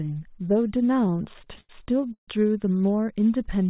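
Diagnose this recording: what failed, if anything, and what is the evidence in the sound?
Network and jitter buffer: repeated stalls (stutter) between 0.97 and 2.28 s. Late packets emptied the buffer, so the speech was stretched and faded; nothing is lost.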